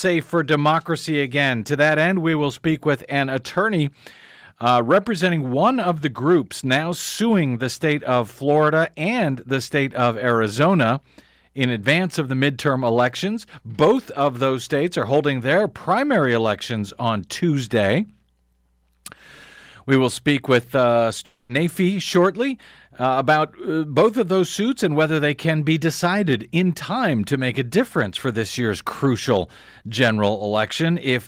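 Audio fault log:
21.25 to 21.51 s, long network dropout: the speech cuts out for roughly a quarter of a second and is replaced by a smeared continuation of the last sound, a buzz or hiss that fades over about 240 ms before the audio resumes. This points to a likely loss of incoming packets. The receiver had nothing new to play, so it extended what it last held, and when the stream returned, the 240 ms that went missing was skipped over rather than recovered.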